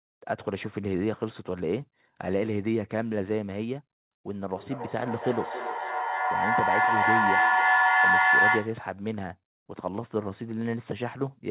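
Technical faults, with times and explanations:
4.52–8.91 s, feedback howl: a whistling tone near 1.5 kHz swells over the sound, with the loop repeating roughly every 300 ms and peaking about 7 dB above the speech before it cuts off. Two devices in the same room were sharing the call, so each pass from loudspeaker to microphone came back louder, and the repeats narrowed onto the frequency the loop favoured. The sound stays within the narrow band below 4 kHz, which points to a G.711 call codec.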